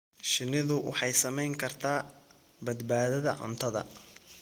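No technical faults can be heard in this speech clip. The Opus voice compression shows only light coding traces, with the band reaching to about 20 kHz, which fits a hybrid mode at around 20 kbps.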